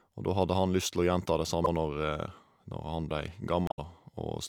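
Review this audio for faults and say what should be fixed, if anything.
Damaged data in a compressed stream at 1.64–1.68 s and 3.67–3.79 s: corrupted bytes make the decoder misread frames and lose sync, producing brief glitches. Verify stream integrity with checksums and error-protected transport so damaged frames are detected and resent before decoding.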